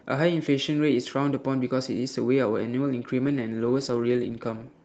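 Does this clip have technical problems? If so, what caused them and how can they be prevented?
Yes. From 3.23 s to the end at 4.84 s the speech turns rough and muffled. This is a call bitrate drop: Opus fell from 32 to 12 kbps, staying lowest for 1.06 s. A steadier network link or a higher minimum encoder bitrate would prevent it.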